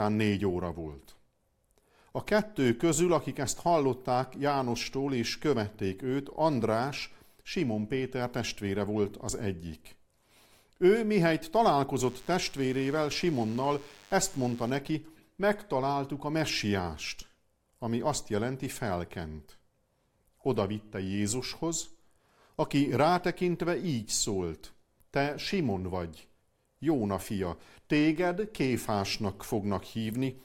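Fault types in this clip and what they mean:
DECT cordless phone buzz: A nearby DECT handset or base sends a radio burst every 10 ms, and the audio circuit rectifies it. Here it is a thin, steady 100 Hz buzz with many harmonics, faint beneath the speech, from 12.02 to 14.70 s.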